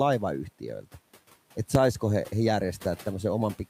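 At 1.75 s there is a single loud bang. This is invalid numbers at full scale. A calculation went infinite or invalid, and the output jumped to its maximum value for a 5 ms block. Because the block is so short, it is heard as one bang, well above the room noise.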